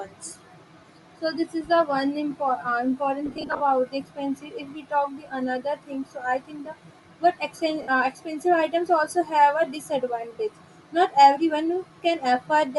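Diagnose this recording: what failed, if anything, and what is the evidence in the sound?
The codec stage: speech carries a grainy, breathy edge with noise-filled highs throughout, most likely Bluetooth LC3 compression, which fits roughly 48 kbps with 10 ms frames.

The wireless link dropped audio, giving lost LE Audio frames: scattered gaps from 3.26 to 3.60 s, runs up to about 40 ms, then 60 ms at 7.82 s. The decoder concealed them by smearing the last spectrum into noise.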